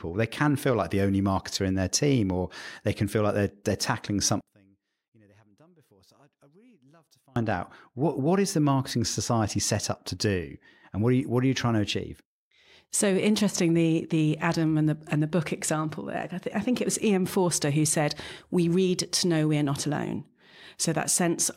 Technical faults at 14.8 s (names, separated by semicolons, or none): none